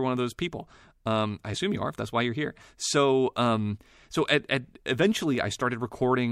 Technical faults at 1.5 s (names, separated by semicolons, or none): compressed frames skipped